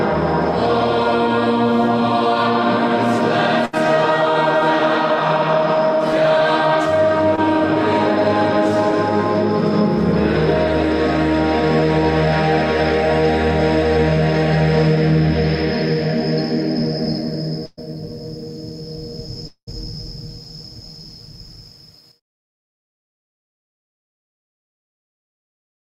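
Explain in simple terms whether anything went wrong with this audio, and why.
A few things went wrong, all from audio getting lost on its way through the network.

At 3.65 to 3.75 s and again at 17.65 to 17.79 s there's a burst of packet loss. About 80 ms and then 120 ms of audio never arrived. The receiver stretched out the last sound and let it fade, so you hear a brief held buzz or hiss. The second one even drops to silence for a moment before the sound picks up again, with that stretch missing.

Around 7.36 to 7.39 s there's a short concealed packet loss. Only about 20 ms went missing, and the receiver patched it by continuing the previous sound and blending back in. It comes across as a tiny smear or wobble.

From 19.47 to 19.69 s the sound trails off into a fading buzz or hiss, goes quiet for a bit under a tenth of a second, then resumes with roughly 200 ms gone. That's most likely a long network dropout, a gap long enough that the patching ran out.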